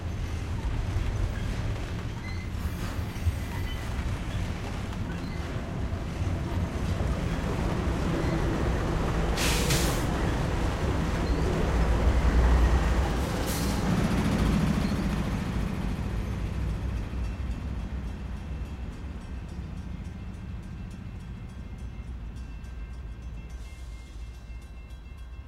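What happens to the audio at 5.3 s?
Around 5.24 to 5.28 s the everyday sound is briefly jumbled by chunks out of order: a 20 ms block arrives one chunk late and plays after the block that should follow it. Nothing is missing, but the swap creates three hard joins, heard as a quick garbled moment. On a waveform the trace jumps abruptly at each join, and a spectrogram shows thin vertical broadband lines there.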